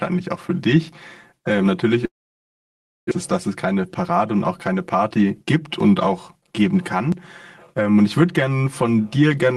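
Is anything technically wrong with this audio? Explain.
Yes, there are three faults.

From start to finish the speech sounds hollow and phasey, as if heard through a tube. This is channel delay (comb filtering): one channel is about 5 ms behind the other, and when the two are summed to mono, content they share cancels at evenly spaced frequencies. The first notch sits near 100 Hz, with further notches every 200 Hz or so above it, giving fixed gaps across the spectrum.

From 2.05 s to 3.13 s, right after "für dich ähm natürlich", the sound trails off into a fading buzzy tail and then into silence lasting nearly a second, before resuming at "ist dass es". About a second of audio is simply gone. The likely cause is a long network dropout: nothing arrived, so the receiver stretched the last sound until it faded out. When packets returned, playback picked up further on, with timing shifted by roughly 20 ms.

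At 7.12 s, just after "auch geben", there is an abrupt jump forward in the sound, and no gap of silence. This fits a dropped buffer (overrun), where the program failed to collect its samples before the hardware overwrote them. Around 40 ms of audio vanished, and the two sides of the gap were joined directly. The audio also passed through an Opus call path at 24 kbps, which limits the top end to 12 kHz.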